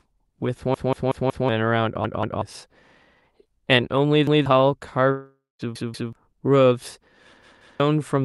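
From 0.74 to 1.49 s the speech stutters as a repeated buffer: a 186 ms slice, which fits an 8192-sample buffer, plays four extra times because fresh audio arrived late. About 0.7 s of speech is skipped. The same fault returns at 2.04 to 2.42 s (two repeats), 4.27 to 4.46 s (one), 5.76 to 6.13 s (two) and 7.43 to 7.80 s (two). On a waveform these show as identical blocks placed end to end. On a spectrogram they look like a copied pattern with a hard vertical edge at each join.

Between 5.11 and 5.62 s there is a gap most likely caused by a long network dropout, with about 480 ms of audio missing. The receiver fills the gap by continuing the last sound as a fading buzz or hiss. In the final 180 ms there is only silence, and then the speech resumes further along. The spectrogram shows smeared energy thinning into a blank band, and the waveform shows a decaying envelope that falls to flat.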